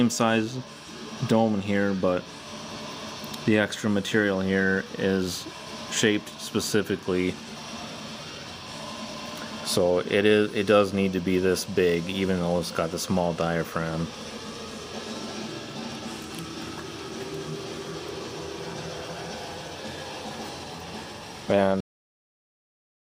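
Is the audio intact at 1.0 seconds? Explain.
Yes, the audio is intact at 1.0 seconds, with no dropout, click, distortion or other fault audible at that moment.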